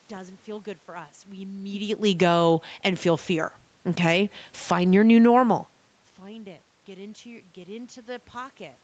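Between 3.91 and 6.33 s, speech and background sink together by about 3 dB: automatic gain falling, as the control lowers gain on input it judged too loud or too noisy for its starting gain.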